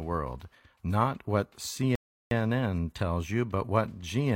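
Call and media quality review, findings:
Rebuffering stall at 1.95 s, right after "world not what". Speech cuts to silence for 0.36 s, then resumes exactly where it stopped. Playback buffer ran dry, player waited for more data. No content lost. About 0.36 s added to playback.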